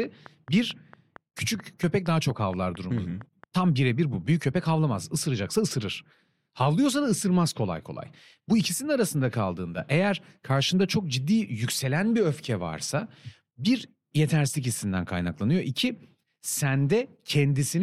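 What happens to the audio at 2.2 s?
At 2.2 s the speech sits inside a train of clicks running from 0.04 to 3.45 s: about fifteen regular ticks at 4.4 per second, roughly as loud as the speech, likely from electrical interference.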